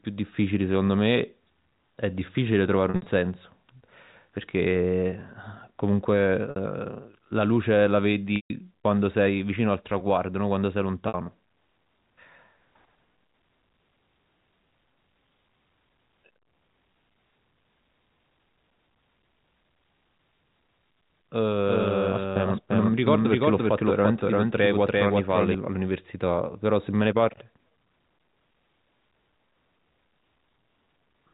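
Packet loss with pitch repetition hits the speech at 2.9–3.06 s, 6.5–6.56 s, 8.36–8.5 s and 11.08–11.14 s. The receiver fills each gap by looping the last pitch period, so the shorter gaps sound like a brief held buzz rather than a click or hard dropout, while the longest fades into silence before the speech returns with a short cross-fade. The first gap is scattered over 160 ms. The third is the longest, at 140 ms.

From 21.66 to 25.54 s, a doubled audio track appears. A full-band copy at roughly equal level trails by about a third of a second, starting and stopping abruptly. It has no decay or room colour, which distinguishes it from reverberation or a decaying echo. The likely cause is a second, slower capture path. All of this sits within the 4 kHz band of G.711 telephone coding.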